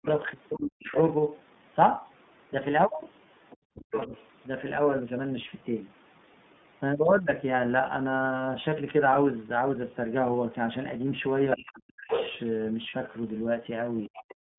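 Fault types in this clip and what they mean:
iLBC codec: Throughout, the speech sits in a narrow telephone band of about 150 Hz to 3.6 kHz, with a rough, slightly synthetic edge that is plainly audible. The codec models each 30 ms frame's excitation on its own, without borrowing from the previous frame, at a rate that fits 13.33 kbps. The upper band is simply gone and the voice texture is coarsened, though the words stay clear.
Speech suppressed in double talk: From 0.0 to 4.13 s and again from 11.56 to 14.25 s, while the far end is also talking, the talker's speech dips and breaks up in pieces, falling by as much as roughly 40 dB and adding up to something under a second in each stretch. The likely cause is an echo canceller that could not tell the local voice from the loudspeaker echo and pulled down both together.
Other side's voice leaking through: A second voice can be heard under the talker from 0.06 to 4.24 s, at roughly 10 dB below the main speech, and again from 11.51 to 14.34 s, louder at roughly 5 dB below. 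This is likely the far end playing on the talker's loudspeaker and being picked up again by the microphone, where the echo canceller failed to remove all of it.
Lost iLBC frames: Two brief holes occur, one at about 3.77 to 3.82 s and one at about 12.90 to 12.94 s, each a single 30 ms frame. The decoder fills each gap by repeating the last pitch cycle blended with noise, giving a short held, faintly buzzy vowel. Because every iLBC frame decodes independently, the voice is back to normal immediately after.
Background gated by the echo canceller: Right at the end, from about 14.53 to 14.58 s, the room sound briefly drops away by about 34 dB for roughly 50 ms. The echo canceller clamps the microphone hard while the loudspeaker is active, muting the background along with any echo, and the ambience returns the moment it releases.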